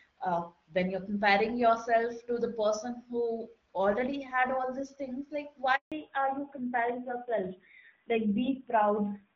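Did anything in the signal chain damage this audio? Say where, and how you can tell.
Yes. The first fault is a handover gap at the network stage. The sound stops abruptly at 5.76 s and stays silent until 5.92 s, a 160 ms hole. No speech frames arrived while the call switched links, so that stretch is simply missing.

The second fault is a fallback to narrowband at the codec stage, starting at 5.92 s and running to the end. Before it, the HD Voice codec carries clear wideband speech. After it, nothing remains above 4 kHz, and the speech sounds duller and rougher. That fits a switch to AMR-NB at around 7.4 kbit/s.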